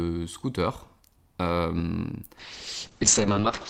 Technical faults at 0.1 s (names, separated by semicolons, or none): none